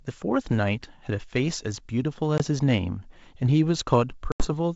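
At 2.38–2.42 s and again at 4.32–4.48 s the speech drops into abrupt silent holes of 20 and 80 ms, then returns slightly distorted for a moment. This is packet loss on an ADPCM call, leaving the decoder's predictor and step size out of step.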